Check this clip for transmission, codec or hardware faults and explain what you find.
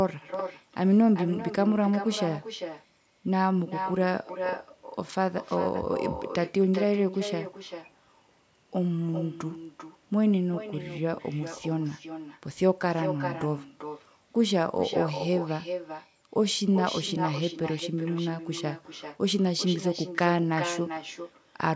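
Two faults are present: an uncancelled echo and a steady train of clock slip clicks. The call microphone processing, with nothing above 8 kHz, is normal.

The echo with no canceller runs through the whole recording. The far end plays the speech over a loudspeaker. Its microphone captures it and sends it back unremoved. The return arrives after roughly 0.4 s, at about 10 dB below the direct speech. Each phrase gets a quieter, thinner shadow trailing close behind it.

Clock slip clicks run from 0.24 s to 21.59 s. A faint tick arrives roughly every 0.3 s, around seventy in all. The likely cause is two devices on unsynchronised clocks, mismatched by something near 70 parts per million. Each time the drift reaches a full sample, one sample is dropped or repeated. The ticks are regular and stand out most on loud, sustained speech. They vanish in the pauses.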